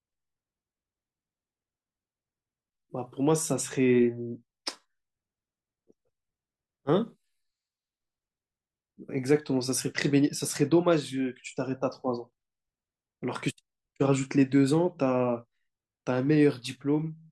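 No technical faults can be heard anywhere in this speech recording.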